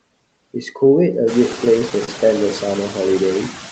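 Noise suppressor artifacts run through the whole clip. The suppressor pulls down the bands it judges to be steady noise, by about 21 dB, so the background drops away in pauses and swells back under the speech. Around 1.5 s the room noise rises. Unlike a noise gate, which switches everything on or off, this works band by band.

From 1.52 to 2.08 s there are repeated stalls, a stutter. Packets arrived late, the jitter buffer ran dry five times, and each time the receiver stretched the last bit of sound to fill the wait. These holds add up to about 70 ms, the longest about 29 ms, which is roughly 12 percent of that stretch. Nothing is lost. The audio drags and hiccups instead of dropping out, which is what separates it from packet loss, where pieces vanish or are replaced. Across the clip, nothing is heard above 8 kHz, which points to Opus working at a bandwidth of about that width.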